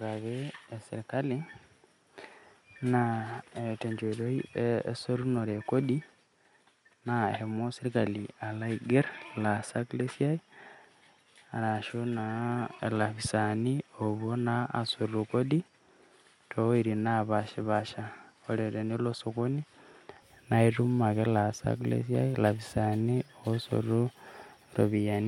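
From the start until about 20.22 s, the speech is band-limited, with nothing above about 11.4 kHz, so it sounds a bit dull and boxy. It also sits roughly 5 dB quieter, with a faint noise floor well below it. At 20.22 s the top end and level snap back with no gap. That's likely an input switched to a poorer device, with the system changing back to the better microphone at that point.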